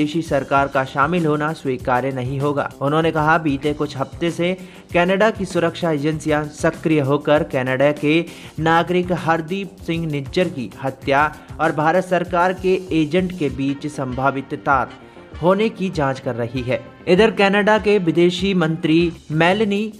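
No technical faults can be heard anywhere in the audio.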